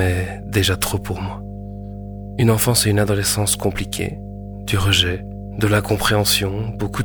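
A steady mains hum at 50 Hz runs under the speech from start to finish, sitting roughly 10 dB below it, with power-line current leaking in through a ground loop or nearby transformer. A spectrogram shows an unbroken horizontal line at 50 Hz with fainter low harmonics.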